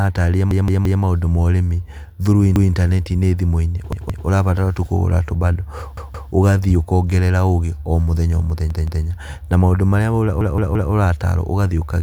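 Six repeated-buffer stutters run through the speech. A roughly 171 ms chunk, which fits an 8192-sample buffer, replays when fresh audio doesn't arrive in time. You hear the same slice again with a hard seam at each repeat, four times in total at 0.51 to 1.02 s, twice at 2.56 to 2.73 s, and three times each at 3.93 to 4.27 s, at 5.97 to 6.32 s just after "tu kũgũra tũbando", and at 8.70 to 9.05 s after "ũgĩ o mũthenya o". Then four plays again at 10.41 to 10.92 s.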